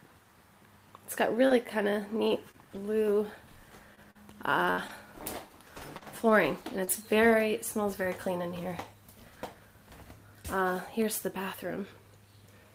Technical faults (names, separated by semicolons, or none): scattered short gaps